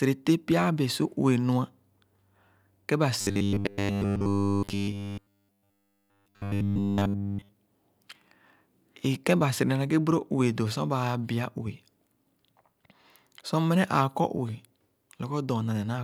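A speech recording in which, from 3.21 s to 7.49 s, the voice collapses into robotic sound from repeated short buffers: a rigid, metallic buzz at a fixed 100 Hz that only loosely tracks the speech. Essentially the whole stretch is repeated material rather than new audio. The likely cause is starved playback, with the software looping the last chunk of audio; the 100 Hz pitch fits a buffer of about 10 ms being repeated.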